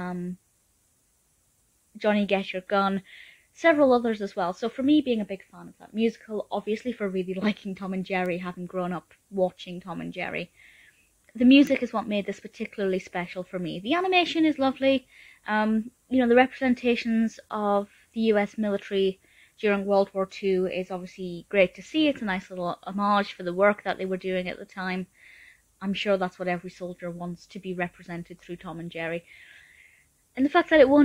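At 8.26 s and again at 11.67 s there is a bit error spike, a single-sample tick peaking at about -20 dBFS and then about -14 dBFS. One flipped bit throws that sample off by a power of two before the next sample returns to normal, so each sounds like a dry, broadband snap with no relation to the surrounding audio. Unlike a dropout or splice click, nothing is lost or shifted around it.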